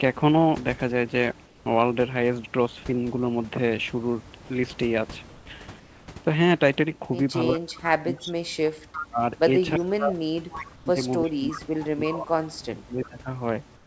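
At 1.46 to 1.66 s and 5.30 to 5.46 s, the sender's discontinuous transmission likely stopped sending during pauses. The receiver filled each gap with comfort noise in place of the background: a flat, featureless hiss, up to about 4 dB quieter than the room noise it replaces.

From 7.49 to 8.15 s the echo canceller likely mistook double talk for echo and turned everything down, so the speech is suppressed in double talk. The voice sinks by as much as about 35 dB. The same happens briefly at 9.08 to 9.22 s. From 9.77 to 13.3 s the dips are deeper, around 40 dB, and most of that stretch is affected.

Echo leak overlaps these. A loudspeaker's echo canceller likely failed to remove all of the pickup, so a copy of the voice returns 343 ms late, about 10 to 20 dB below the speech. This happens at 7.85 to 8.33 s, 8.92 to 9.07 s, 10.58 to 10.65 s and 11.75 to 12.10 s.

Comfort noise returns at 10.76 to 10.86 s and again from 13.76 s to the end.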